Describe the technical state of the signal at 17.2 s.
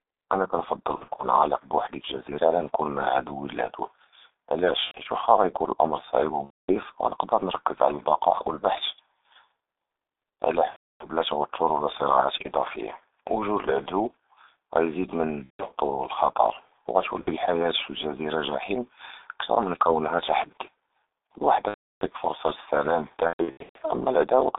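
At 17.2 s the signal suffers VoIP packet loss concealed by the speech codec, from 17.21 to 17.31 s. Packets stopped arriving. The decoder filled the hole by repeating its last pitch and vocal-tract filter with falling gain. The gap sounds like a short buzzy, stretched tone or coloured noise that fades. It fits two missing 30 ms frames. Because each decoded frame depends on the previous one, the sound stays weak and smeared for a moment after packets resume.

Underneath, the G.723.1 codec is active for the whole clip. The band is held between 300 Hz and 3.7 kHz, so the speech sounds thin and muffled. The damage is heavy, at a rate of 6.3 kbit/s. With 30 ms frames and a slowly updated voice model, consonants blur and the voice takes on a hoarse, rough quality.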